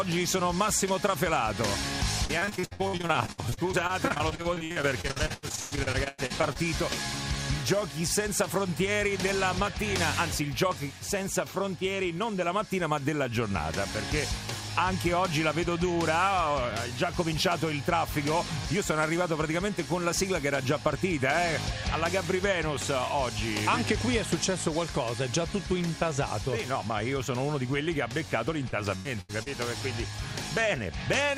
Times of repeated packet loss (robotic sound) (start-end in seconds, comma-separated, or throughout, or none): 2.25-6.58, 28.70-29.48